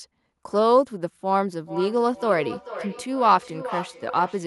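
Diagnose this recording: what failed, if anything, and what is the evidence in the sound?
Feedback echo between two devices, a call-processing failure. From 1.66 s to the end, the speech returns at a fixed spacing of roughly 0.4 s, peaking about 12 dB below the speech. A second device's microphone is picking up another device's playback, and neither echo canceller covers it. Room reverberation would smear the sound continuously rather than repeating it at a set interval.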